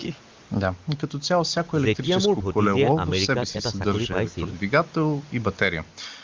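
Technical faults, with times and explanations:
Nothing stood out on listening to this speech, which carries the band-limited character of a wideband call path topping out a little above 7 kHz.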